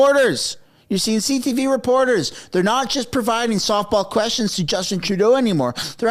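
At 4.85 s there is a corrupt frame decoded: bit errors damaged a single compressed frame, and the decoder played it out instead of discarding or concealing it. The misread codes and gains put energy at frequencies that don't belong to the surrounding sound, for only about the span of that one frame. It comes through as a short, sharp blip or chirp, fairly loud at around -10 dBFS.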